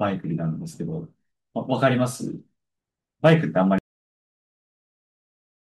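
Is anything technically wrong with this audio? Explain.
Yes, there's a cut-off end. At about 3.78 s the speech just stops mid-sound and the rest of the clip is flat digital silence. What's happened is that the final stretch of audio never got written out or played, so the recording was truncated rather than faded or finished. You hear it as an abrupt chop: no natural decay, no room tail, just the sound ending on a hard edge and dead quiet after it.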